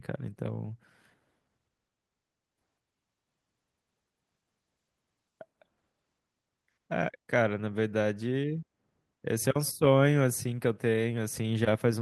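No faults are audible in this speech recording; the call-path coding noise and the band limit near 12 kHz are as expected for a normal Opus call.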